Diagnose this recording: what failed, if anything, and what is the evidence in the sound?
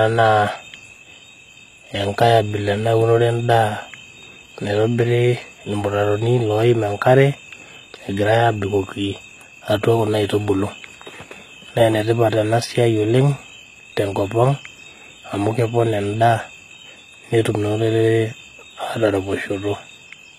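The treble of the speech sounds bright but synthetic throughout, with s sounds gritty and lispy and nothing above 14.8 kHz. The codec stage is the likely cause: HE-AAC compression at a low bitrate, around 20 kbps, rebuilding the upper band from copied lower harmonics.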